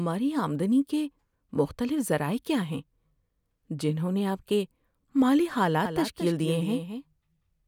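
A doubled audio track begins at 5.85 s, just after "نے آپ کے مالی", and continues to the end of the clip. From that point a second, full-band copy of the speech runs about a fifth of a second behind the original and roughly 10 dB quieter. It enters abruptly and has no decay or room colour. It sounds like a faint, hard echo trailing every syllable, likely from a second capture path or an edit that left two out-of-step copies mixed together.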